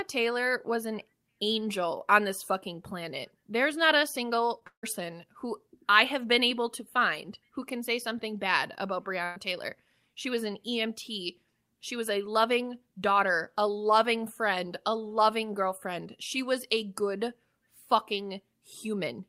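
A speech recording with three gaps in transmission. At 4.59 to 4.63 s there is a brief smear where about 20 ms went missing. That is short concealed packet loss: the receiver extended the preceding sound for roughly 16 ms and blended back into the real audio. Right after, from 4.67 to 4.85 s, the sound trails off into a fading buzz or hiss and then about 100 ms of silence before resuming, with roughly 160 ms skipped. The likely cause is a long network dropout, where the decoder filled for a while and then gave up. At 9.25 to 9.38 s a held buzz or fading hiss stands in for about 120 ms of lost audio. This is a burst of packet loss, concealed for roughly 111 ms by repeating and attenuating the last sound before the stream picks up further on.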